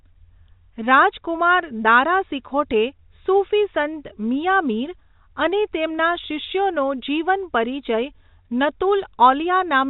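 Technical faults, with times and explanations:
No faults found; the speech carries the normal character of G.711 telephone coding, with nothing above 4 kHz and at most a faint hiss that rises and falls with the signal level.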